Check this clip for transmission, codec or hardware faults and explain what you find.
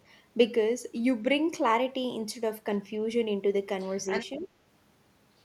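Two echo-related problems show up near the end of this speech clip, overlapping around 4.4 s.

Other side's voice leaking through, from 3.79 to 4.46 s: a second voice sits underneath, roughly 10 dB below the talker. The likely cause is the far end playing on a loudspeaker, with the echo canceller not fully stripping it from the microphone.

Speech suppressed in double talk, from 4.38 to 4.51 s: right where that leak overlaps, the talker's own voice dips sharply, by something like 20 dB, for about a tenth of a second. The canceller likely couldn't separate the two and ducked everything together.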